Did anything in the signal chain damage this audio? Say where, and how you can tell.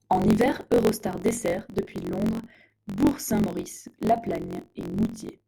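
Yes: a buzz near 45.9 Hz runs throughout the speech, which plays about 1.07 times fast at normal pitch. That points to a truncated block size mismatch at the buffer stage, consistent with 1024-sample blocks having their tails discarded.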